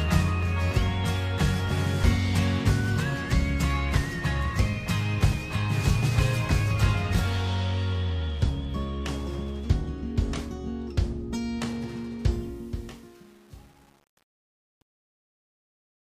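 Truncation distortion on a fade runs from 12.31 s to the end at 16.01 s, worst from 12.51 s onward. As the audio fades out, the level stage drops low bits undithered, which fits an 8-bit path, so the tail turns gritty and steps.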